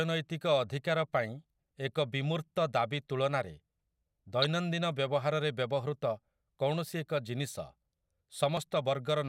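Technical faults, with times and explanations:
4.42 to 4.50 s, corrupt frame decoded: a short burst of chirpy, squeaky noise cuts across the speech for about 74 ms, peaking at roughly -15 dBFS. Bit errors inside the compressed data were not caught, so the decoder played the damaged frames as if they were valid. Misread codes and wrong gain values put energy at frequencies the speech never had. The burst's length fits about three consecutive damaged frames.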